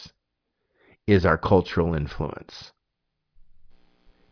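No technical faults are audible anywhere in the speech.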